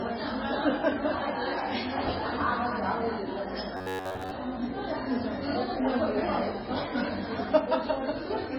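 From start to end the audio carries heavy MP3 compression damage. The treble is cut off, so the top sounds dull and closed in. The remaining sound is watery and swirly. Weak detail flickers in and out, and attacks blur. This is likely a very low bitrate, which fits around 16 kbps. With so few bits, the encoder drops the treble and throws away quiet frequency lines frame by frame.

From 3.77 to 4.31 s comes robotic sound from repeated short buffers. The audio turns into a stiff, metallic buzz at about 93.8 Hz. That pitch suggests a short slice of about 10.7 ms playing again and again. New audio likely arrived too slowly, so the last slice was repeated to fill the gap. Most of this stretch is repeats, and the audio that belonged there is lost.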